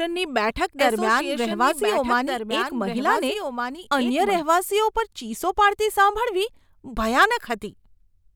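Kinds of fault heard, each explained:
Doubled audio track: A second, full-band copy of the speech trails the original by about a second and a half, roughly 5 dB quieter, with no decay or room colour. It is already running when the clip opens and cuts off abruptly at 4.42 s. This is likely a second capture through a slower path. On a spectrogram the speech patterns appear twice, offset in time, and the waveform shows overlapping envelopes that suddenly drop to one at 4.42 s.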